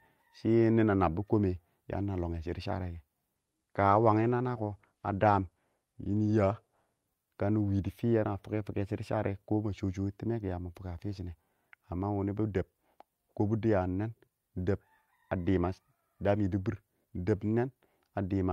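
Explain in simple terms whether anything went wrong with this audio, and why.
Between 3.36 and 8.15 seconds there is a call bitrate drop. The call's connection judged it had less room, so the encoder was told to squeeze the speech into far fewer bits, bottoming out for about two seconds. With less data, it codes the sound more roughly and throws away the highest frequencies, cutting the top off at about 12 kHz. That's why the speech sounds duller and grainy there until the bitrate climbs back.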